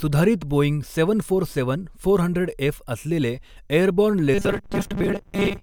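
From 4.34 s to the end of the clip at 5.63 s, the likely cause is new audio reaching the player too seldom, so the software keeps replaying a very short buffer, about 5 ms long, while roughly half of the real speech is skipped. The result is robotic sound from repeated short buffers: those repeats impose a fixed 200 Hz buzz, turning the voice metallic and rigid while it still loosely tracks the rhythm of the speech.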